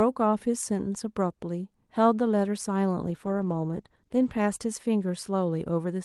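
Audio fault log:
3.05–4.51 s call bitrate drop: speech turns rough and grainy as the encoder codes with far fewer bits, worst for 1.35 s, which fits a fall from 32 to 15 kbps.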